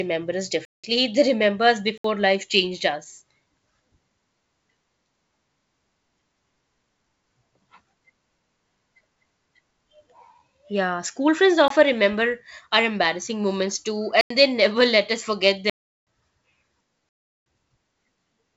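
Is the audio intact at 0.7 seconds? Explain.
No. From 0.65 to 0.84 s the speech drops into a dead, hard-edged hole of about 186 ms. This is a block of digital silence: samples were replaced by zeros, probably because the output buffer wasn't filled in time.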